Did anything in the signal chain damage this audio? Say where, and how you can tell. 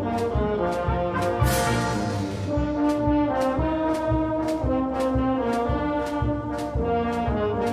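No, nothing in the signal chain can be heard to have damaged this audio, and the signal stays continuous and intact throughout.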